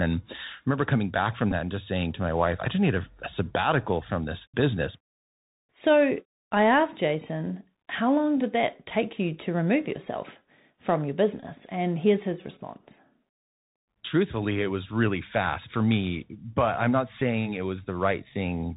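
Speech that sounds narrow and boxed in throughout, with nothing above 4 kHz, a grainy hiss under the voice, scratchy s sounds and roughness on loud bright syllables. This is the Bluetooth CVSD headset codec: its one-bit up-or-down coding at 64 kbps adapts too slowly for fast high-level changes. Brief buzzes near 267 Hz at 1.51 s and 17.20 s, and a short buzz near 267 Hz from 11.40 to 11.43 s, are Bluetooth headset packets repeated. Lost stretches of about 7.5, 11.2 and 22.5 ms were filled by replaying the previous packet every 3.75 ms.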